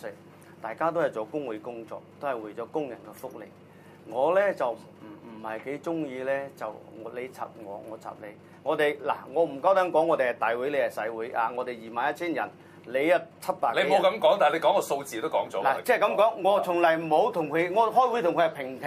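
No technical faults can be heard anywhere in the audio.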